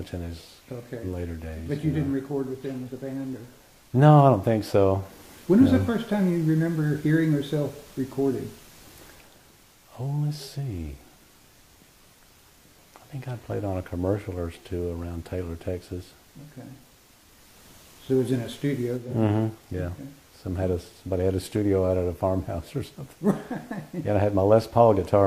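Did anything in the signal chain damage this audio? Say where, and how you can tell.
Yes, at the codec stage: AAC frame loss with concealment. From 19.08 to 19.14 s a 43 ms stretch, which fits a single lost frame, was rebuilt by the decoder from the last good spectrum, leaving a brief smeared, noisy blur in the sound.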